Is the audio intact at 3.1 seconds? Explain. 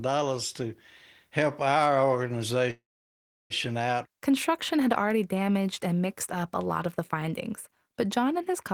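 No. A call audio freeze runs from 2.71 to 3.53 s, likely from delayed packets emptying the jitter buffer. The last sound smears into a brief fading buzz, then about 0.7 s of silence: a blank band on the spectrogram, a flat waveform.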